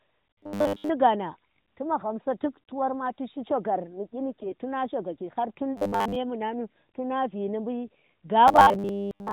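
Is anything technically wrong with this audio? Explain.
Yes, there are two kinds of problem in this speech clip, both riding on what sounds like a narrowband AMR mobile channel at its top, lightly compressed mode, with nothing above 4 kHz.

The robotic sound from repeated short buffers shows up three times: 0.33 to 0.89 s, 5.77 to 6.16 s, and 8.48 to 9.32 s. The speech turns into a stiff, metallic 100 Hz buzz that still loosely tracks the talking. The likely cause is audio arriving too slowly, so the playback side keeps looping the last chunk instead of waiting. A 100 Hz buzz fits a 10 ms chunk being replayed, with most of the real audio in those stretches skipped rather than heard.

The AMR bit errors hit from 4.28 to 4.55 s. For that quarter second or so, the voice keeps its rough pitch and loudness but goes hoarse, scratchy and a bit gargly. That fits a weak link flipping the less protected bits in the codec frames, at somewhere around one bit in twenty. 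The frames still pass their integrity check, so the decoder uses them, but the pulse positions and the finer pitch, gain and spectral details come out wrong.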